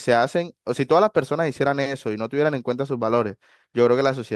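Nothing faulty can be heard.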